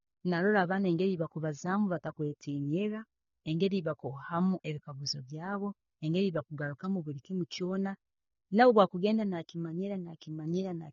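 Throughout, likely AAC compression at a low bitrate, consistent with about 24 kbps, removes everything above 6.9 kHz, so the speech sounds dull with plainly audible coding damage.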